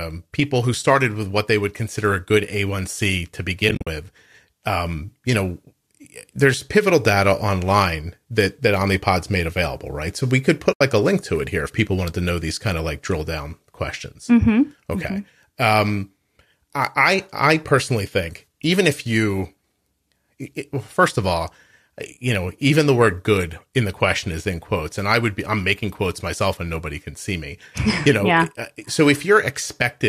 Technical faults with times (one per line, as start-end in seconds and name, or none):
3.69-3.87 AAC frame loss with muting
10.73-10.81 AAC frame loss with muting